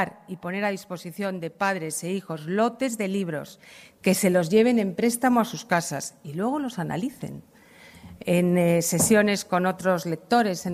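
No technical faults are audible.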